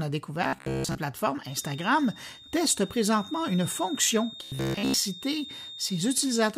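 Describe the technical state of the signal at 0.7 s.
At 0.7 s the speech is caught in robotic sound from repeated short buffers, spanning 0.44 to 0.99 s. A rigid metallic buzz near 66.7 Hz replaces most of the real audio, likely from a 15 ms block being looped while new data lagged. A spectrogram shows evenly spaced horizontal harmonic lines, and the waveform shows identical repeating cycles.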